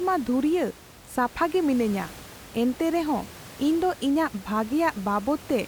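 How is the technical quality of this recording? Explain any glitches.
No glitches or faults heard.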